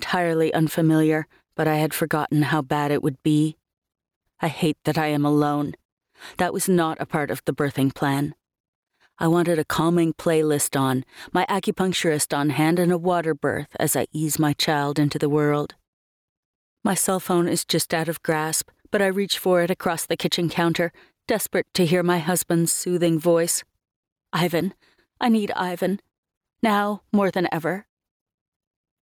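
The input gain was likely set far too high, so a fast limiter clamps down on every loud sound across the whole clip. This produces gain pumping: the level swings by around 10 dB, leaving the sound squashed and breathing.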